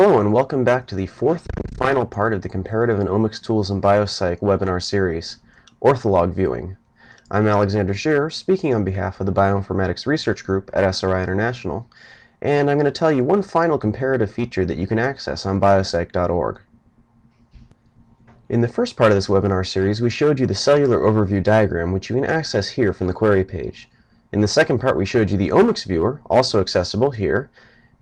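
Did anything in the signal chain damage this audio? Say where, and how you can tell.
No, nothing in the signal chain has left audible damage on this audio. No stage from capture through to playback leaves a mark I can point to at any moment in the recording.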